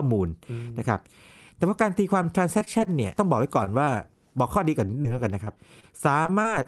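From 2.23 to 2.88 s the speech breaks into repeated packet loss (robotic sound). Packets kept failing to arrive, and each hole, the longest about 22 ms, was bridged by extending the last sound before the next hole came. About 40 ms of real audio is lost and about 90 ms is filled in, roughly a seventh of the span, so the passage sounds choppy. On a spectrogram the harmonics freeze into short flat smears, and the waveform shows small repeated, too-regular cycles between intact stretches.

At 3.64–3.68 s there is a short stall from a late packet. The jitter buffer ran dry, and the receiver held the last sound for about 21 ms until the packet arrived, then carried on with nothing lost. It comes across as a sound held slightly too long with a faint buzz. A spectrogram shows a brief horizontal stretch of unchanging frequencies, and the waveform a short run of repeated periods.

Short concealed packet loss follows at 3.84, 5.02, 5.44 and 5.80 s. 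Each time about 20 ms of audio never reached the decoder in time and was replaced by a continuation of the preceding sound. Each one is a quick smear or wobble. On a spectrogram it shows as a faint blurred sliver where detail briefly goes soft, and in the waveform as a short, overly smooth patch.

A second stretch of repeated packet loss runs from 6.23 to 6.67 s and is heavier. About 80 ms is missing and a similar amount is patched, nearly a fifth of the span, with holes up to about 25 ms. The choppy quality is stronger here. Across the clip, content stops near 12 kHz, which fits an Opus call path at a modest bitrate.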